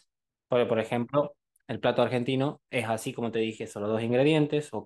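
No technical faults can be heard anywhere in the recording; the signal stays continuous and stable throughout, with nothing in it that points to a problem in capture, processing or transmission.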